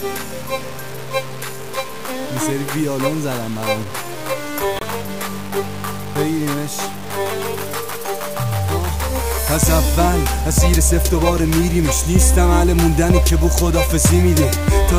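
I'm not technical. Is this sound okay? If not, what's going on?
No. Throughout the clip there is a grainy, gritty roughness that rises and falls with the sound itself. Unlike steady background hiss, it comes and goes with the sound. The likely cause is low bit depth without dither, where the audio was stored with too few steps and simply chopped off.

From 4.76 to 4.83 s there is a short burst of odd noise. That is a corrupt frame decoded: a few damaged chunks of compressed data were played anyway, putting sound at the wrong pitches. It is a brief, odd-sounding blip.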